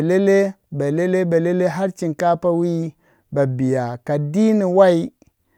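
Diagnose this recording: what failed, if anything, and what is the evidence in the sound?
Nothing in the signal chain has failed: the speech recording carries no audible dropouts, clipping, glitches, hum or timing faults at any stage from capture through playback.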